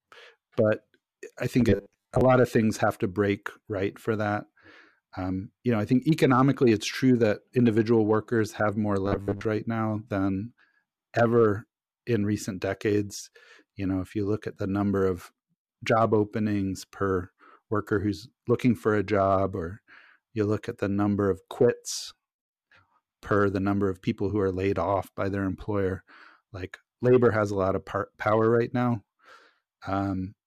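From 1.69 to 2.21 s, the speech turns into a rigid, metallic buzz. This is robotic sound from repeated short buffers. Much of that stretch is short slices of audio played over and over. The buzz sits at a fixed 100 Hz, which fits a slice about 10 ms long. The likely cause is new audio arriving too seldom. The same buzz returns from 9.06 to 9.46 s.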